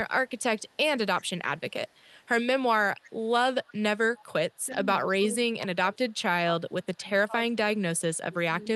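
A speech recording carrying two call faults. The first is an echo leak: the far end was likely playing the call on a loudspeaker, and its echo canceller let part of that playback reach its microphone and return. A faint copy of the speech trails the original by about 374 ms at 0.26–0.77 s, 1.2–2.28 s, 3.0–3.29 s, 3.63–3.75 s and 4.16–4.64 s. It sits roughly 40 dB below the speech at first and rises to about 25 dB below by 3.0 s. The second is speech suppressed in double talk. When both ends spoke at once, the canceller likely could not tell the local talker from the returning echo and turned everything down. From 4.65 to 6.25 s the speech dips in patches totalling about a second, by as much as 25 dB. From 6.61 s to the end it sinks again by up to about 20 dB. Through all of this the Opus call path's top end stops near 12 kHz.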